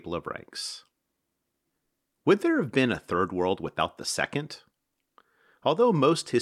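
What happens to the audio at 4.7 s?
At 4.7 s the speech continues intact, with no dropout, click, distortion or other fault at that moment.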